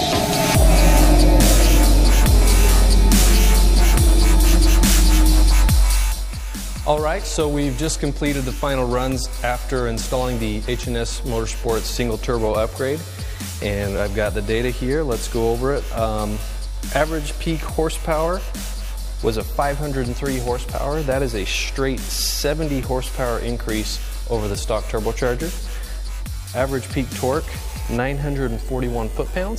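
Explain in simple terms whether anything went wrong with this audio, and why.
Nothing went wrong with this audio that a listener can pick out. The sound carries on steadily, with no moment where it breaks, jumps or changes unexpectedly.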